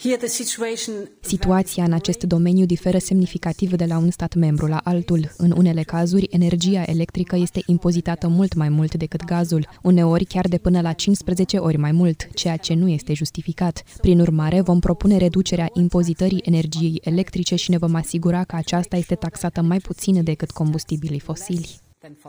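From start to finish there is crude rate conversion. The sample rate was changed without proper filtering, likely by linear interpolation, which fits a step from 32 kHz up to 44.1 kHz. The error sits about 30 dB below the signal. It adds a gritty, inharmonic fizz that follows loud and high sounds.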